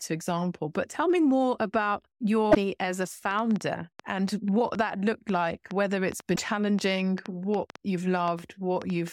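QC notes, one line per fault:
2.49–2.57 s, damaged data in a compressed stream: a brief glitch after "tell me more about", before "as a". Corrupt frames throw the decoder off sync while it hunts for the next header.
3.31–9.09 s, train of clicks: about 30 similar clicks, irregularly spaced at 4.3 per second, roughly 10 dB above the sound, starting after "as a". Likely interference or a faulty connection.
6.33–6.39 s, damaged data in a compressed stream: a short glitch as the decoder misreads bad frames and resynchronises.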